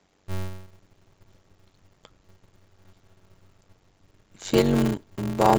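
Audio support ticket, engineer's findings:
Steady buzz at about 93.8 Hz across the whole speech clip, speech dragging at 0.625x speed but pitch roughly normal. Block size mismatch (padded): upstream writes short blocks, downstream reads 512-sample blocks and zero-fills the rest, so there's a gap every block.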